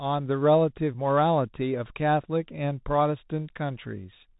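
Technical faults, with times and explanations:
Throughout, Bluetooth CVSD headset codec: the speech sounds boxed-in and phone-like, with nothing above 4 kHz, s sounds coming out scratchy, loud bright passages roughening, and a granular hiss sitting under everything, all plainly audible. The codec sends one bit per sample saying only up or down, and its adaptive step cannot keep pace with fast, loud high-frequency detail. The coarse stepping leaves that grainy noise, which fits a 64 kbps headset link.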